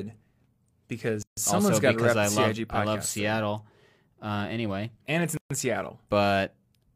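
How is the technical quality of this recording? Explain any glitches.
The speech is broken twice by brief silent holes, each a gap at a join of encoded pieces. From 1.23 to 1.37 s, just before "someone's got to rep", the sound drops out for about 147 ms. From 5.37 to 5.51 s, after "anyway and it's", it drops out for about 133 ms. Each time the edges are smeared, and speech resumes exactly where it stopped. The gaps fall 4.0 s apart, which points to segments encoded separately and joined without trimming the encoder's start-up delay and final-frame padding.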